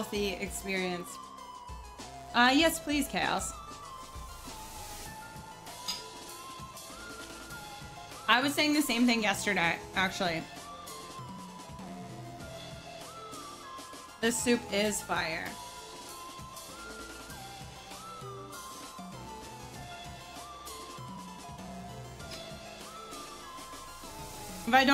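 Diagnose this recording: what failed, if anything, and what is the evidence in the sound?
Nothing failed; no stage of the chain shows a fault.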